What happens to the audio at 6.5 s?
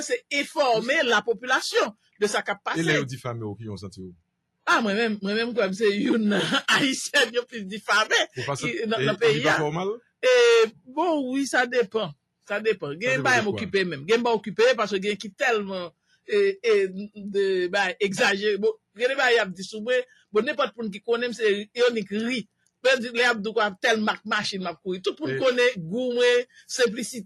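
Nothing goes wrong at 6.5 s; the audio plays through that moment intact, with no dropout, click or other fault.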